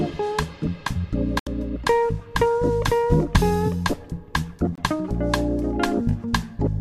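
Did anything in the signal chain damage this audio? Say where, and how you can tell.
Yes, a digital broadcast dropout in the reception stage. The audio goes silent from 1.39 to 1.47 s and again from 4.75 to 4.78 s, consistent with three lost 24 ms frames, then one. The receiver muted on bad frames, so that material is gone.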